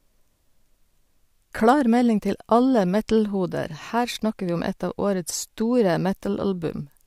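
No technical faults can be heard in this recording.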